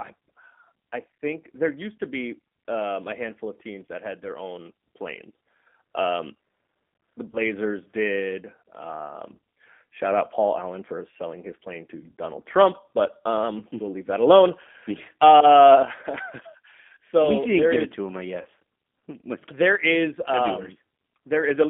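Throughout, the speech passes through a G.729 codec, consistent with 8 kbit/s coding. Band-limiting to 200 Hz–3.5 kHz and pulse-based excitation make it thin, rough and plainly synthetic.

At 7.31–7.40 s, and again at 18.41–18.46 s just after "it to him I", VoIP packet loss concealed by the speech codec covers about 20 ms, then 40 ms, of missing audio. The decoder extends its last pitch into a brief, fading smear before recovering.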